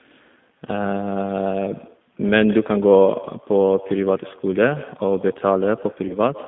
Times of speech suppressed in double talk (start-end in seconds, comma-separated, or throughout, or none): none